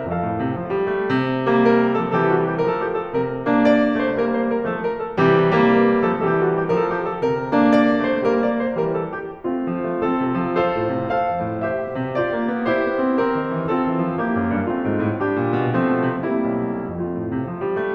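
No faults are audible anywhere in this music clip.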